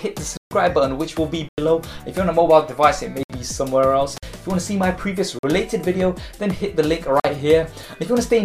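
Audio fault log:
0.37, 1.49, 3.23, 4.18, 5.39 and 7.20 s, block of digital silence: the sound drops out abruptly, for 139, 93 and 65 ms, then three times for 46 ms. Samples were zeroed with no fade, likely because the output buffer wasn't filled in time. The 93 ms gap fits a 4096-sample block and the 46 ms gaps 2048-sample blocks.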